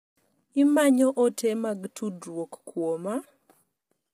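From start to finish the speech has a rough, grainy texture, with a hiss filling the gaps between the pitch harmonics and a top end that sounds dulled and synthetic. That points to low-delay AAC compression, likely AAC-ELD of the sort used for video calls, at a rate that fits about 24 kbps. Its short frames can't separate the harmonics cleanly, so with so few bits the damage here is heavy.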